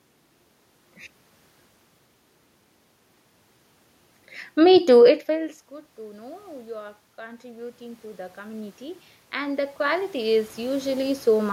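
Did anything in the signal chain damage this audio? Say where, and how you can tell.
Yes. Automatic gain rising, in call processing: from 6.7 to 11.5 s, the gain climbs about 18 dB, swelling the voice and room noise together.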